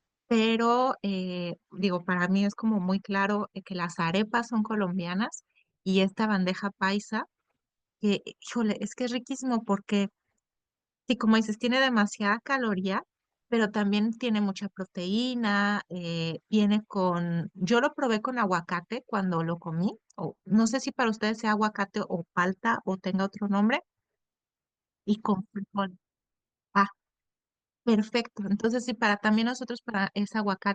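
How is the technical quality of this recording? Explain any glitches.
Nothing here stands out as a glitch; the recording holds together steadily, with no dropouts, clicks or other disturbances to point to.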